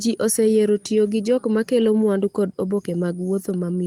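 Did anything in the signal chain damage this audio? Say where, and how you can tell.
No, nothing in the signal chain has damaged this speech recording. No stage along the path, from capture through to playback, leaves any mark that can be heard.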